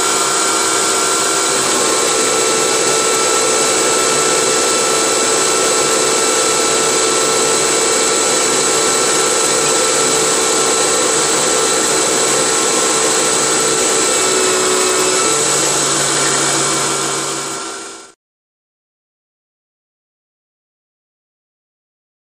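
No technical fault can be heard anywhere in the audio. There is no moment in it that calls for a time or a cause.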